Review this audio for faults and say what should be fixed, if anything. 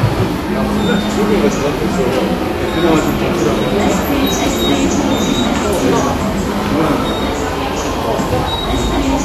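Vorbis compression, throughout: nothing sounds above 14.2 kHz, and the treble turns hissy and grainy, likely from coarse residue quantisation at a low bitrate around 35 kbps. Re-encode from the original source at a higher Vorbis quality setting.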